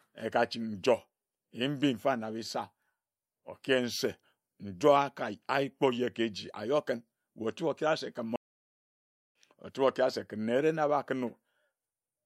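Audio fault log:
8.36–9.35 s, playback stall: the speech stops dead after "okere se ken" and stays silent for 0.99 s. It then resumes with "ochibe okere se ken". The player likely ran out of data or was blocked, so it output nothing until it recovered.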